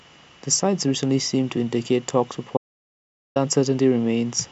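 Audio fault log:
2.57–3.36 s, audio dropout to silence: The speech cuts off abruptly mid-flow and returns just as suddenly about 0.79 s later. The gap is dead digital silence, with no room tone or background hiss underneath. Whatever was spoken there is simply gone. The likely cause is a brief loss of the input signal, such as a disconnected device, a failed link or an accidental mute, while the recording carried on writing zeros.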